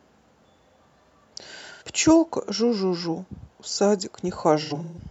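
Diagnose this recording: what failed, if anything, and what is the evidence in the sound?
The failure is at the codec stage: AAC frame loss with concealment. At 1.71 to 1.83 s the speech turns briefly smeared and phasey for about 85 ms, which fits two lost frames. From 4.62 to 4.99 s a worse cluster follows, with about 256 ms of patched audio scattered over 341 ms and the longest run roughly 150 ms. With the real frames missing, the decoder rebuilt each gap from the last good spectrum, randomizing signs or interpolating energy. A spectrogram shows blurred, noise-like blocks with the harmonic detail flattened at both spots.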